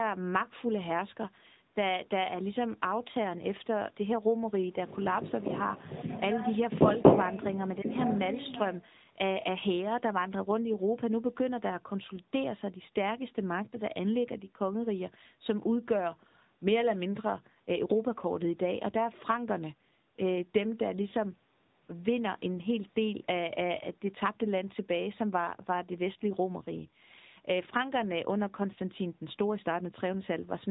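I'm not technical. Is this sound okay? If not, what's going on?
No. From start to finish, the speech has passed through an AMR narrowband mobile codec, the squeezing a 2G or 3G phone call applies. It rebuilds each tiny slice of speech from a simple model of the mouth and throat instead of sending the real sound, and it throws away everything above about 3.8 kHz. That gives the muffled, boxy phone tone, and the rebuilding leaves plainly audible artefacts, an artificial edge on the speech.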